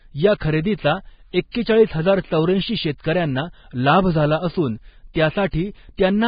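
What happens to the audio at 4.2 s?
At 4.2 s the speech carries the same damage heard across the whole clip: nothing reaches above 4.9 kHz, and the remaining upper band is hissy and grainy, with roughened vowel tones and softened consonant attacks. This is likely Vorbis compression at a heavy setting. The degree of damage fits a bitrate near 16 kbps. The encoder has lowered its cut-off and quantised the treble so coarsely that fine detail turns into noise of similar energy.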